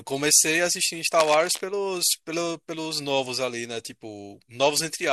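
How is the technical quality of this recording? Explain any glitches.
One glitch stands out. From 1.19 to 1.63 s, cable scratch noise appears: dense, uneven crackle, roughly 10 dB under the speech, likely from a worn connector being moved. Unlike a single click or steady hiss, it rustles irregularly throughout that stretch.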